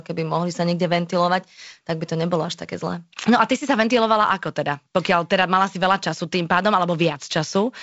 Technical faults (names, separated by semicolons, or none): none